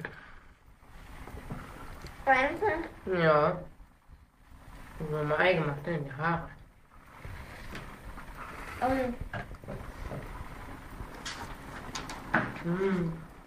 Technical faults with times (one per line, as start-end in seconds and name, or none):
none